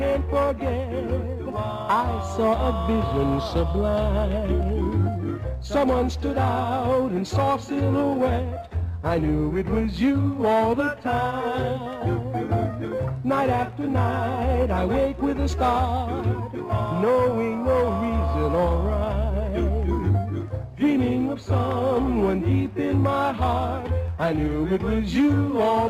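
At 15.54 s, compressed frames are skipped. The audio jumps ahead roughly 70 ms, about two 32 ms frames.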